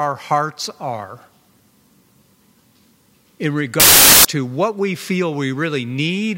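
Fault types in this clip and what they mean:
Samples built from the wrong bytes: from 3.80 to 4.25 s the sample bytes are misassembled, so low-order bits dominate and the speech becomes loud, harsh broadband noise.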